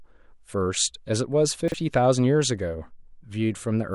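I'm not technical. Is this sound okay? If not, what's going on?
No. Around 1.68 to 1.74 s, chunks out of order: one 20 ms slice of speech arrived two slices late, so that moment sounds briefly jumbled.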